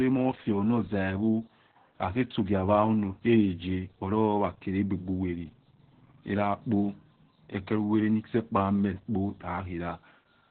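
From start to finish the speech carries Opus voice compression, and it's heavy. Nothing gets through above about 4.3 kHz, so the whole thing sounds narrowband and muffled, like an old phone line. The hoarse, slightly robotic texture points to the SILK linear-prediction coder running in its lowest band and coding the excitation very coarsely, which fits a starved bitrate somewhere around 8 kbps.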